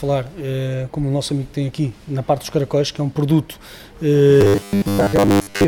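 At 4.41 s the sound turns into robotic sound from repeated short buffers, and it stays that way right to the end. It takes on a stiff, metallic buzz locked at 100 Hz, still loosely tracing the shape of what was there. The likely cause is new audio arriving too seldom, so playback keeps looping the last 10 ms chunk to cover the gaps. That happens for about 70% of the time, and the real audio in between gets skipped.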